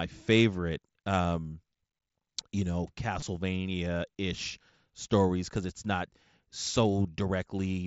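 Concealed Bluetooth headset packet loss occurs at 1.23 s, from 3.20 to 3.22 s, and at 7.03 s in this speech clip, which passes through an mSBC headset link. Each gap lasts about 15 to 22 ms, which fits runs of two or three lost packets. The receiver fills each gap by repeating the best-matching recent stretch of waveform, so there is a brief buzzy, held tone and a slight warble as the real speech resumes.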